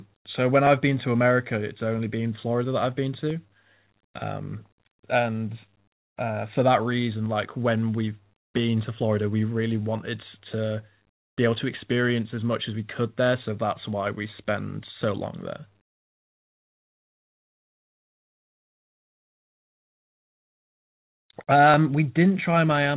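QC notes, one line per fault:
0.67 s to the end, clock drift buffer slips: a click recurs every 1.32 s under the speech, and that strict regularity sets it apart from random packet-loss glitches; likely two clocks disagreeing by a few hundred ppm, dropping or repeating a handful of samples each time.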